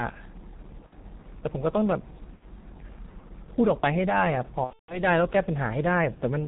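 Throughout, the speech carries G.723.1 codec damage: nothing above 4 kHz, a muffled, hoarse timbre and smeared consonants. The coarse 30 ms framing and slow model updates sound heavy, consistent with the 6.3 kbit/s mode.

VoIP packet loss concealed by the speech codec occurs at 0.86–0.93 s and 2.36–2.45 s, each about 60 ms lost, and again across 4.64–5.01 s, where roughly 210 ms goes missing within a 240 ms span, the longest gap 150 ms. The decoder extends its last pitch and filter with falling gain, so these spots stretch into a buzzy tone or coloured noise that fades, with weakened speech lingering after each gap.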